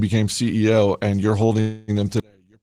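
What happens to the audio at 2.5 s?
At 2.5 s the speech is inside a collapse that begins at 2.20 s, right after "and you're", and runs to the end of the clip. The level falls by about 34 dB and the centred voice all but disappears, leaving only a faint residue. This is the signature of one channel inverted: the likely cause is one stereo channel with reversed polarity, so the content shared by both channels cancels when they are summed to mono.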